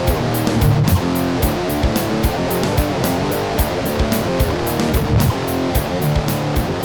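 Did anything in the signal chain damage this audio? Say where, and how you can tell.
Yes. A train of clicks runs from 2.56 s to 6.77 s: around fifty same-shaped pulses at about 13.3 per second, unevenly spaced, peaking about 5 dB above the sound. The likely cause is interference from nearby equipment coupling into the analogue wiring and injecting repeated impulses.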